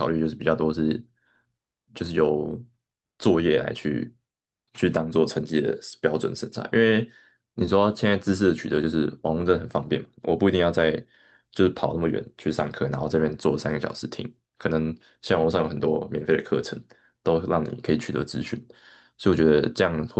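Speech clip, no technical faults.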